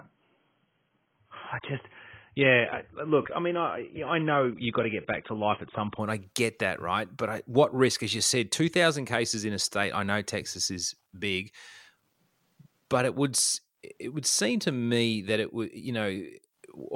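It's a speech clip, and the first 6.0 seconds are a classic adaptive stream starting at a low bitrate. Up to then nothing reaches past about 3.7 kHz, so the top end sounds dull and smeared with coding artefacts, which fits a low-rate AAC version around 16 kbit/s. At 6.0 s, right before "I get that right", the player switches up to a better rendition, probably around 96 kbit/s, and the quality jumps with no gap.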